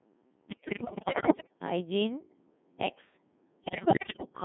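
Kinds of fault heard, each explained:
Codec 2 vocoder: The speech is rebuilt from sine waves using only pitch, voicing, energy and a spectral envelope, so the original waveform is gone. It comes across robotic and buzzy, boxed into roughly 150 Hz to 3.5 kHz, and the heavy damage fits a 1.6 kbit/s mode.
Bit errors on digital voice radio: Flipped bits corrupt the vocoder's per-frame pitch, level and spectrum settings, so the synthetic voice lurches unpredictably. From 0.48 to 1.53 s, with roughly a third of bits wrong, it breaks into warbles and bleeps. A milder burst follows at 3.64 to 4.30 s.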